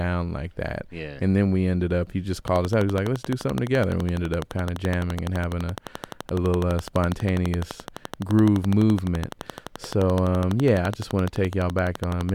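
Likely interference, a faulty connection or power supply causes a train of clicks from 2.48 to 12.30 s, after "ended up he just": regular ticks, 11.8 per second, about 10 dB above the speech.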